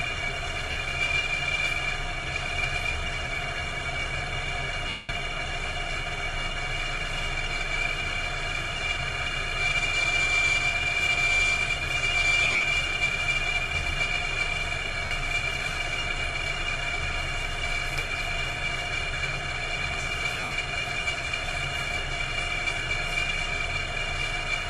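Lost LE Audio frames cut into the sound at 0.71, 4.89, 12.43, 15.05 and 20.34 s. The gaps last 50, 200, 150, 60 and 140 ms. The third and fifth losses are scattered over 200 ms, with runs up to about 50 and 70 ms. The decoder repeats the last spectrum with random signs, so tones smear into noise and then fade. Light codec compression is also present.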